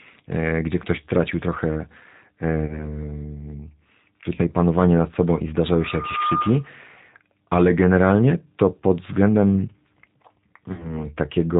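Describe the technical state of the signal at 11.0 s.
At 11.0 s the sound sits inside a stretch of VoIP packet loss concealed by the speech codec, running from 10.72 to 11.07 s. About 60 ms of audio went missing, which fits two lost packets. The decoder filled the gap by repeating its last pitch and vocal-tract shape with falling gain, giving a stretched, buzzy tone or coloured noise that fades. Unlike a plain dropout to silence, the voice stays weak and smeared for a while after packets resume.

Underneath, the whole clip carries plainly audible G.729 codec damage. The band stops at 4 kHz, and the speech, rebuilt from a filter, a pitch predictor and a few pulses per frame at a rate that points to 8 kbit/s, sounds rough and faintly synthetic. A plain low-pass filter would leave the speech muffled but smooth, without this roughness.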